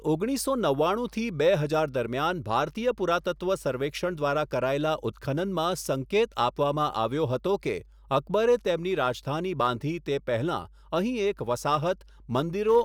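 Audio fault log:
Throughout, mains hum: a steady low tone at 50 Hz sits under the speech for the whole clip, with some low harmonics above it, at roughly 25 dB below the speech level. It is heard in pauses and thickens the low end when the voice is present. Hum at this frequency comes from the 50 Hz power line coupling into the signal path, as through a ground loop between connected equipment or stray field from a nearby transformer.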